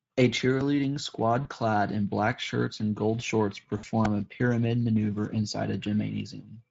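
Speech, roughly 7 s long, coded throughout with the Speex codec at 16.8 kbps, whose starved excitation leaves the voice plainly hoarse and noisy. VoIP packet loss concealed by the speech codec occurs at 1.41–1.48 s, just before "clad in black shirts", and at 3.77–3.85 s, between "shirts and gold shorts" and "a pyramid maneuver inside". The decoder extrapolates from its last pitch and filter, so each gap, roughly 40 and 60 ms long, becomes a stretched, fading sound. A repeated buffer at 4.05 s, where late audio made the device replay the same tiny block several times, gives a brief hard-edged click or buzz that fits a 64-sample buffer.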